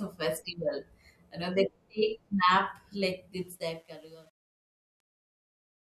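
Speech that fades out at the end shows truncation distortion on the fade from 3.37 s to 5.82 s, starting just after "they take nap like". The fade itself runs from 3.37 s to 5.83 s, but the gain stage behind it drops low-order bits without dither. Resolution fits about 9 bits. As the level falls, the waveform collapses into coarse steps. From 3.7 s to 5.83 s the tail turns gritty.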